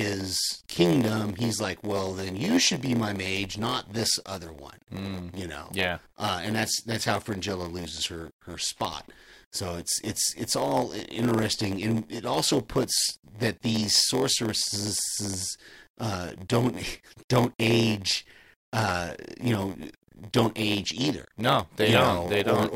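From start to finish the speech carries a block size mismatch (padded): each block arrives short and gets zero-filled, which fits a 512-sample read. That leaves a buzz at about 86 Hz, and the speech drags at 0.938 times normal speed.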